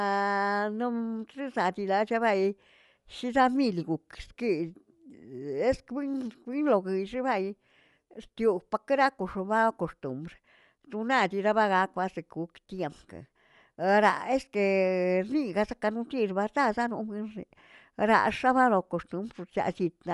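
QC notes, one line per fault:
Throughout: Bluetooth LC3 compression. Likely passed through a Bluetooth LE Audio link at a modest rate, around 48 kbps with 10 ms frames. Nothing survives above 11.5 kHz, and the coarsely coded upper band gives the speech a plainly audible breathy, grainy edge.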